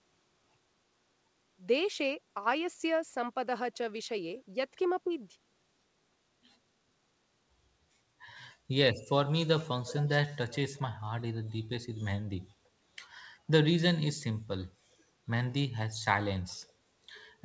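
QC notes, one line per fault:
5.04–5.11 s, speech suppressed in double talk. The sound dips by about 10 dB for roughly 70 ms. The level then recovers. The likely cause is the other side talking at the same moment. The echo canceller could not tell this talker apart from its own loudspeaker echo. It turned both down together, so this side loses level while the overlap lasts.
9.85–10.11 s, 10.53–10.58 s and 10.76–10.81 s, echo leak. A faint copy of the speech returns 254 ms after the original. The first scrap is the longest, at about 15 dB below the speech. The next is about 20 dB down. The last is only a trace, about 35 dB down. The likely cause is a loudspeaker at the far end whose echo canceller did not remove everything its microphone picked up, so that leftover was sent back.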